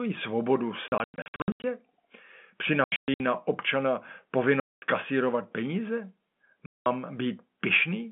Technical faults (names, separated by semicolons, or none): packet loss filled with silence